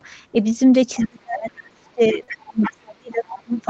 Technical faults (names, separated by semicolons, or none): other side's voice leaking through; speech suppressed in double talk; short stall from a late packet